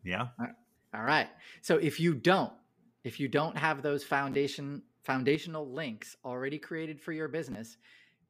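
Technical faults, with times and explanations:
0.95–1.07 s and 5.35 s to the end, one channel drops out: the level falls abruptly by about 6 dB and stays down for each span, briefly at first and then for the rest of the clip. The likely cause is one stereo channel going silent before the mono sum, which halves the shared signal. On a waveform the envelope steps down to about half amplitude, and a spectrogram darkens evenly across all frequencies at each edge.
4.32–4.34 s and 7.52–7.55 s, chunks out of order: an 11.61 ms chunk plays one slot late, swapping places with the chunk after it. No audio is lost, but each swap creates three hard joins, heard as a tiny jumbled stutter. On the waveform the trace jumps abruptly at each join instead of continuing smoothly. A spectrogram shows three thin, bright vertical broadband lines about 12 ms apart at each event.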